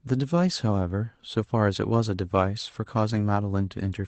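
At 3.15 to 3.17 s, one lost packet was rebuilt from error correction. A 20 ms low-bitrate copy fills the gap, sounding briefly rougher and noisier over the Opus call audio.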